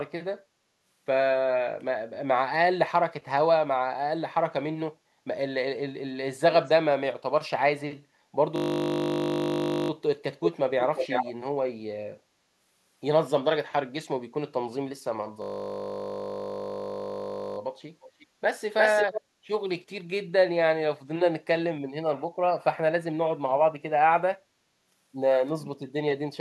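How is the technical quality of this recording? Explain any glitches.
The recording has two recurring glitches: two buzzing freezes and four brief echoes.

System hang loop, 8.56–9.9 s and 15.42–17.58 s. The system froze and replayed one 20 ms buffer, so a steady 50 Hz buzz interrupts the speech.

Echo leak, 10.43–10.52, 10.8–11.33, 18.01–18.26 and 18.78–19.21 s. Speech returns 349 ms late, from near full level down to faint. A loudspeaker's echo likely escaped cancellation.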